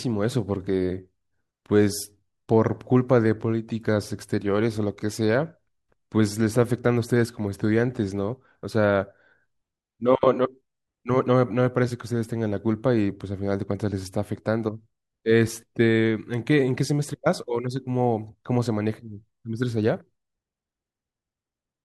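No technical faults can be heard anywhere in the speech recording, and the signal stays steady and intact throughout.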